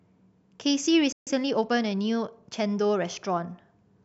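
At 1.12 s the speech stops dead for about 143 ms, until 1.27 s, a playback stall, likely the player running short of buffered data. On a waveform it is a flat gap; on a spectrogram, a clean vertical band of nothing across all frequencies.

From 1.27 s to 2.69 s comes time-compressed catch-up: the player trims its backlog by splicing out short pieces, so speech runs about 1.1 times faster at unchanged pitch. Harmonics stay level on a spectrogram while syllables pack tighter, with small seams.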